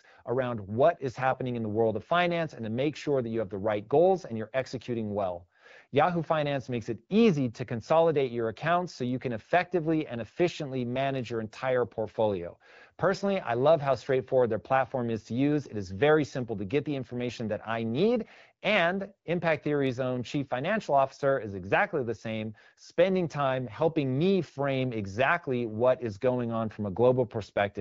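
Speech over an AMR wideband (HD Voice) path, with the band-limited, lightly coded character expected at a mid-range rate around 12.65 kbit/s; no technical faults are audible.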